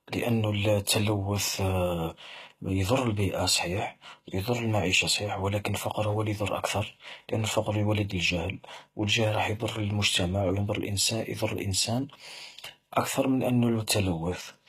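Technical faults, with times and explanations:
Throughout, HE-AAC compression: the sibilants sound gritty and lispy and the treble is synthetic, likely from HE-AAC at a very low bitrate, around 20 kbps, rebuilding the highs from copied lower bands. A spectrogram shows repeated, blocky upper-band patterns ending sharply near 14.9 kHz.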